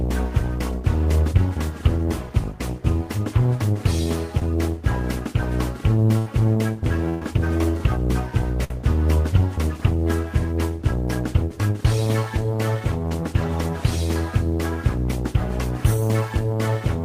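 The audio has two short concealed packet losses, at 4.39–4.42 s and 13.09–13.12 s, where about 20 ms went missing and the receiver extended the preceding sound, leaving a brief smear or wobble. There are also three bursts of packet loss: 80 ms at 6.18–6.27 s, 120 ms at 7.09–7.22 s and about 60 ms at 8.64–8.71 s. In each burst, the concealed sound decays into a held buzz or fading hiss before playback resumes further on, with that stretch of audio gone.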